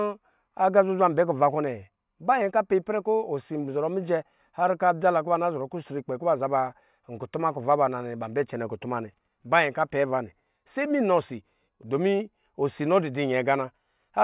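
Speech recording with no audible technical faults anywhere.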